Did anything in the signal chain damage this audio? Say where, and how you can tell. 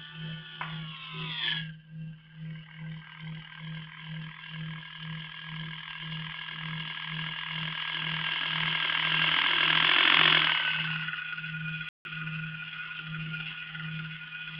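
Yes. A playback stall runs from 11.89 to 12.05 s: the sound cuts out mid-flow and the output stays silent for about 160 ms before it carries on. This points to the playback stage, and the likely cause is that the player either ran short of data in its buffer or had its output thread blocked, so nothing was sent to the output until it recovered and resumed the stream.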